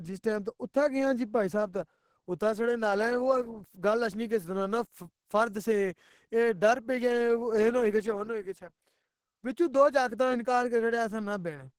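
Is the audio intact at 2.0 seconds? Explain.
No, Opus compression damage runs through the whole clip, including 2.0 seconds. The speech sounds muffled, hoarse and grainy, which fits an encoder likely squeezed to around 16 kbps and switched into its hybrid speech mode, filling starved bands with folded or noise-like content.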